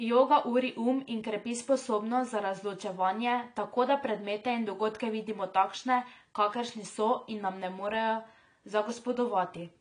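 Speech runs through the whole clip with plainly audible codec damage: the sound is dull and smeared, with a warbling, fizzy texture on sibilants and held sounds. The likely cause is AAC compression at a low bitrate, consistent with AAC-LC at about 32 kbps. On a spectrogram, nothing appears above 10 kHz, and the bands below that cut-off look patchy, with holes and blurred, noise-filled regions where fine detail was discarded.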